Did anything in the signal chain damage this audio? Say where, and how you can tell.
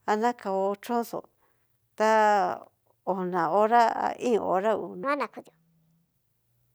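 Yes. From 5.04 to 6.14 s the speech suddenly turns high and hurried, running at 1.37 times normal speed and lifted about five semitones, then drops back. This section at the wrong speed likely came from playback or editing at a mismatched clock rate.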